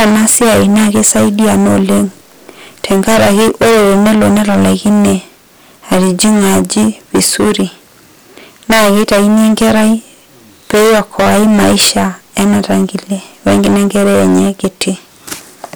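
It's a speech recording with hard clipping running the whole way through, and it's severe. The level going in was roughly 29 dB hotter than the stage could pass, so close to a third of the waveform is sitting flattened against the stage's limit. Those squared-off tops throw harmonics well up the spectrum, which is why every loud sound comes out as harsh fuzz rather than the odd crackle on peaks.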